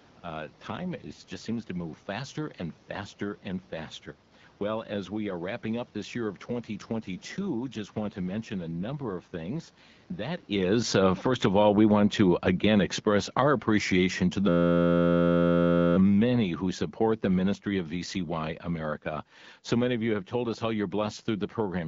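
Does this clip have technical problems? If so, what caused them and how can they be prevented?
Yes. The AMR rate drop makes the voice rough and synthetic from 0.68 to 1.70 s, just before "move faster and faster", and again from 6.89 to 10.12 s, after "up this year of". The network cut the AMR-WB codec from 12.65 to 8.85 kbit/s on a weak radio link. Better radio coverage or signal strength keeps the codec at its full rate.

Automatic gain falling makes the speech and its background sink together by about 15 dB from 10.51 to 20.08 s, ending around "have told us how". The gain control judged the input too loud, or its background noise too strong, and lowered it gradually. Setting a sensible input level, or locking the gain, prevents the slow fade.

A system hang loop turns the sound into a steady buzz at 86.1 Hz from 14.49 to 15.96 s. One 11.61 ms piece of audio repeats exactly because the computer or driver froze while the hardware kept cycling its ring buffer, which fits a 512-sample buffer. 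Updating drivers and easing system load avoids these stalls.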